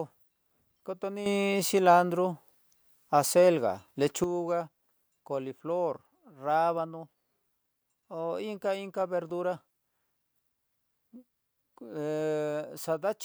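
From 1.26 to 4.24 s there's a sudden gain jump of about 9 dB, voice and noise together, likely a gain setting applied instantly without a ramp.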